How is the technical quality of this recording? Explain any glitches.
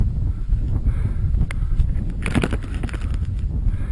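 No glitches or faults are audible.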